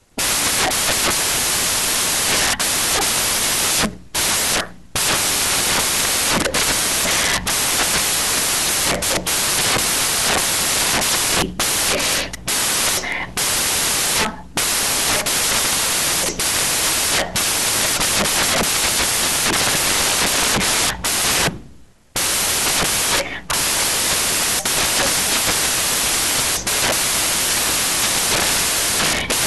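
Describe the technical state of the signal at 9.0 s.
At 9.0 s the speech suffers from samples built from the wrong bytes, a fault running through the whole clip: misassembled bytes push the rapidly changing low bits into each value's top, giving loud, harsh broadband noise. A spectrogram shows flat broadband energy; the waveform looks dense and noise-like.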